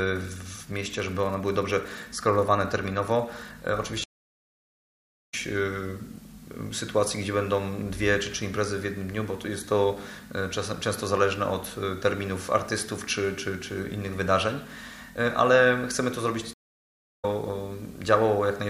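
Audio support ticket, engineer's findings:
Stream reconnect x2: dropout 4.04–5.34 s (about 1.24 s dead air, picks up roughly a second further on) and 16.53–17.25 s (about 0.65 s, skips ahead about half a second). Connection dropped, player reconnected, fresh decoder rejoined the live stream mid-flow.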